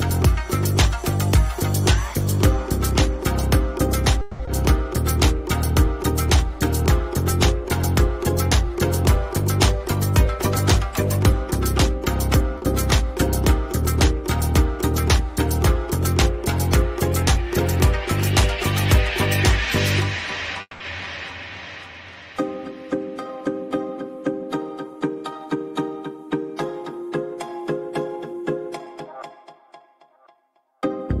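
From 4.21 to 4.49 s there is what is likely a long network dropout: audio stopped arriving, and the receiver covered about 260 ms by extending the last sound into a fading buzz. When the stream resumes, about 140 ms of material is gone for good. The playout delay also shifts by something like 70 ms. The result is a smeared, decaying hold followed by a jump forward in the sound.

Right after, from 4.92 to 9.16 s, a jitter buffer slow-down follows. Having run short, the buffer rebuilt its reserve by repeating single pitch periods and slivers of pauses many times over. Across those four seconds this adds about 43 ms, so playback runs at 99% speed with unchanged pitch. It is a faint drag, with a slight stretching of sustained sounds rather than any obvious break.

At 12.58 to 12.64 s a short stall from a late packet occurs. The packet was due but absent, the buffer emptied, and the receiver stretched the current sound for 40 ms until it arrived. 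Playback then carried on from the same point, adding 40 ms of delay. Nothing is lost, but one sound is held a touch too long, with a small buzzy catch.

From 20.61 to 20.82 s comes a call audio freeze, likely from packets held up in transit. The buffer ran dry and the receiver filled 190 ms: first by continuing the last sound as a fading buzz, then with about 40 ms of near-silence at the end. The audio resumes exactly where it stopped. This inserts a gap and adds 190 ms of delay while losing no content.

Two jitter buffer speed-ups follow, at 22.72 to 25.56 s and 28.23 to 29.54 s. In each, the buffer held more than its target and trimmed it by cutting out short runs of one or a few pitch periods, roughly 150 ms each time. The first stretch plays at 105% speed and the second at 109%, both at the original pitch. The second sounds noticeably hurried and compressed.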